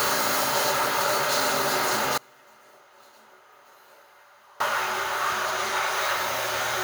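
At 2.18 s the sound cuts out abruptly, leaving only a faint leak of it, roughly 30 dB below normal, until it snaps back at 4.60 s. This audio dropout to a faint residue, about 2.4 s long, likely comes from the wanted signal being lost while the path after the break stayed live.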